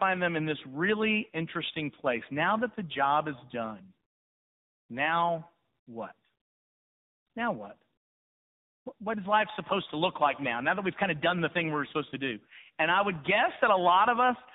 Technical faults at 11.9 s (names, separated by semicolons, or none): tandem speech coding